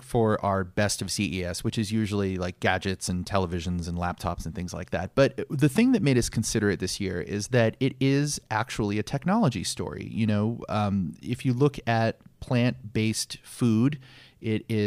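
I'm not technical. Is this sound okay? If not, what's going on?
Yes, this speech recording is technically sound, with nothing in the signal that needs attention or fixing.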